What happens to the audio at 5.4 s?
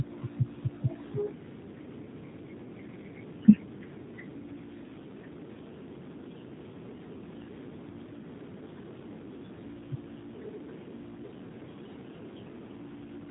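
At 5.4 s the speech carries G.729 codec damage, present throughout: pulse-based 10 ms frame reconstruction gives plainly rough, synthetic speech with nothing above 3.8 kHz, consistent with 8 kbit/s coding.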